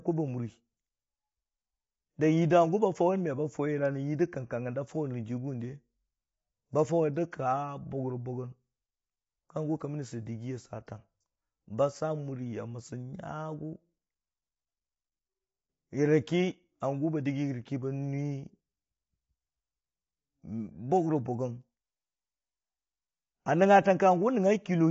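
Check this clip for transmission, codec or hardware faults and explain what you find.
One fault runs through the whole speech clip: low-delay AAC compression. The voice sounds rough and grainy from start to finish, with a hiss-like fill between the harmonics and nothing above about 7.7 kHz. The likely cause is an AAC-ELD encoder of the kind used for video calls. Its short frames resolve pitch harmonics poorly, and the audible damage points to a low bitrate of around 24 kbps. A plain low-pass filter would sound dull but clean. Here the grain sits inside the voice itself.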